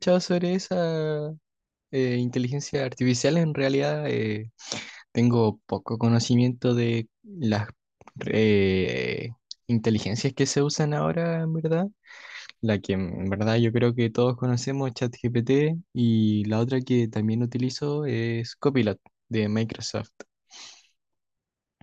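Listening closely to this speech recording, nothing stood out as a technical problem at any point.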